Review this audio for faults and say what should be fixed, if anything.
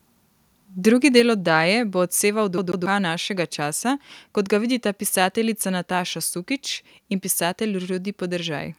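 At 1.17 to 1.2 s the loudest peak breaks into a harsh crackle, most likely from microphone overload. The input went about 2 dB past full scale and a small share of samples were cut flat. The waveform shows squared-off tops, and the spectrogram shows a brief broadband smear. Lowering the microphone's input gain to leave a few decibels of headroom would prevent it.

Right after that peak, at 1.2 s, the speech and the background together drop by about 4 dB in one step. This points to the microphone volume being stepped down in reaction to the overload. The waveform envelope shows a sudden ledge, and the spectrogram darkens evenly across all bands. Setting a fixed input level and turning off automatic gain adjustment in the call software would prevent it.

From 2.58 to 2.86 s the sound stutters like a CD stuck on one turn. A 0.14 s slice repeats twice, with a short mute at each jump back, before the audio continues into "našega časa kot ga". 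The waveform shows identical blocks separated by thin gaps, which appear as matching patterns with narrow vertical breaks on the spectrogram. Cleaning the disc or re-ripping it with an error-correcting ripper would prevent it.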